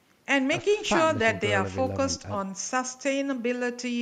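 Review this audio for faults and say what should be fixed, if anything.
Nothing to fix: no faults found in the speech.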